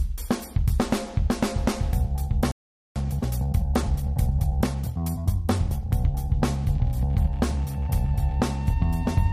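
A playback stall runs from 2.51 to 2.96 s, where the sound cuts off mid-flow and leaves roughly 0.44 s of silence. The likely cause is the player running short of buffered data or its output thread being held up, so nothing reached the output until it recovered.

Time-compressed catch-up follows from 2.96 to 5.90 s. To work off the backlog left by the stall, the player trims small slices and cross-fades across the joins, running about 1.15 times fast at unchanged pitch. The passage sounds hurried.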